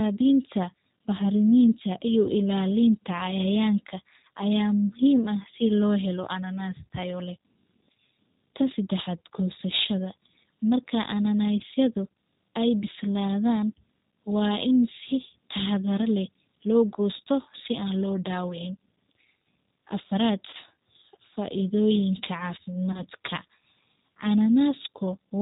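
From start to finish the speech carries the G.729 codec sound. Nothing above 4 kHz gets through, and the voice is rebuilt from a filter, a pitch predictor and a few pulses per frame, so it comes out slightly rough and synthetic. The damage is plainly audible and fits the 8 kbit/s G.729A variant.

Then there's VoIP packet loss concealed by the speech codec, four times. The first is at 2.26 to 2.30 s, right after "bahrimintaa iyo". The others are at 11.59 to 11.62 s, 20.50 to 20.55 s and 22.92 to 23.02 s. The gaps sound like about 10, 10, 30 and 20 ms of lost audio, which suggests one to three dropped 10 ms frames. Each time the decoder stretches the last sound into a buzzy tone or coloured noise that fades, and the voice stays weak or distorted for a moment after.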